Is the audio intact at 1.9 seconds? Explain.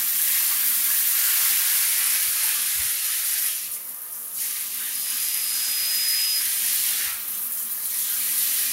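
Yes, at 1.9 seconds the sound plays through cleanly, with no dropout, click, distortion or other fault to be heard at that moment.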